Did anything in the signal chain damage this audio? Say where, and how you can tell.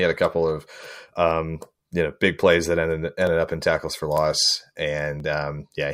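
Yes, three isolated clicks at 3.27 s (between "big plays that ended" and "up in tackles for"), 4.17 s (just after "up in tackles for") and 5.20 s point to dropped samples, likely from a driver or buffer stage losing a fraction of a millisecond of data. Each shows as a thin vertical line across the spectrum, where the waveform jumps to a later value. Unlike a packet-loss dropout, no audible sound goes missing and there is no gap or smear, only a single sharp tick.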